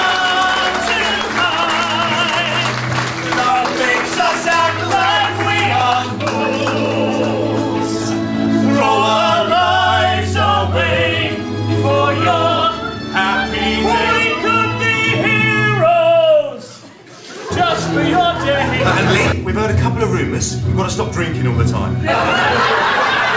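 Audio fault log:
Nothing stood out on listening, with the sound carried over a G.722 call path at 64 kbps and nothing above 8 kHz.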